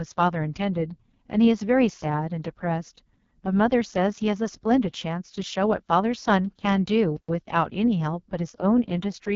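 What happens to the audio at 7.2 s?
The player stalls from 7.17 to 7.29 s. Its output was starved, likely because data stopped arriving or the playback thread was blocked, so nothing reached the output for 120 ms until it recovered. The sound cuts out abruptly mid-flow, leaving a brief hole of silence, then resumes. The gap is long enough to register clearly as a dropout.

Running through that moment, as across the whole speech clip, is heavy AMR wideband (HD Voice) codec damage. The encoder rebuilds speech from a pulse-driven vocal tract model and fills the top band with shaped noise, and the coarseness here fits its lowest 6.6 kbit/s mode. The result is rough, raspy speech with nothing above about 7.4 kHz.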